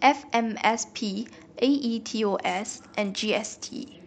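From about 2.48 s to the end, a Bluetooth SBC bit pool drop degrades the speech. The link lowered the bit pool from 31 to 11, which fits roughly 83 kbps. Upper sub-bands lose their bits. Treble dulls, and gritty quantisation noise rises.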